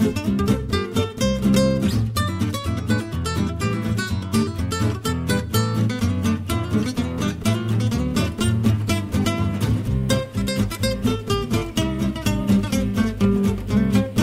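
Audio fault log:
No faults detected; the audio shows no audible defects anywhere in the clip.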